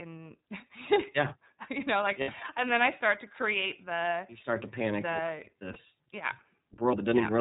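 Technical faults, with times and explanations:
throughout: iLBC codec. The whole recording is band-limited to narrowband, with nothing above 4 kHz, so sibilants and consonant edges are dull and the speech lacks air. The coding damage is plainly audible as a rough, slightly synthetic texture. iLBC codes the excitation of each frame independently instead of predicting from the previous one, and this costs smoothness. The sound fits the 13.33 kbps mode with 30 ms frames.
2.21–2.29 s and 5.73–5.77 s: lost iLBC frames. At each point a short stretch of the speech is replaced by a held, faintly buzzy and breathy tone. The decoder conceals the missing data by repeating the last pitch cycle mixed with noise. The first gap is about 60 ms, which fits two lost 30 ms frames. The second is about 30 ms, consistent with one frame. Because each iLBC frame decodes independently, the speech recovers almost immediately after each gap.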